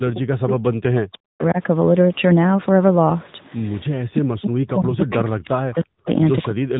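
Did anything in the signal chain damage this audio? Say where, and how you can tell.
Yes. The speech sounds buzzy and synthetic throughout, with nothing above 3.8 kHz. This is the AMR narrowband mobile codec at 10.2 kbps, damaging the audio at the codec stage.

The speech drops away sharply, by up to about 40 dB, from 0 to 1.59 s, 3.93 to 6.07 s, and 6.5 s to the end. The likely cause is speech suppressed in double talk, where the call's echo canceller ducked the talker.

Faint copies of the speech, delayed by 324 ms, appear at 5.0 to 5.16 s (about 20 dB down) and 6.05 to 6.12 s (about 25 dB down). This is likely echo leak from a loudspeaker not fully cancelled.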